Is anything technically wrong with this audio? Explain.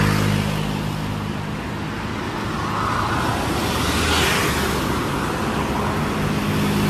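Yes. Throughout, the sound is swirly, hollow and smeared, with blurred attacks and nothing above 14 kHz. This is likely generation loss: about five AAC-LC re-encodes near 64 kbit/s, each requantising on a shifted frame grid.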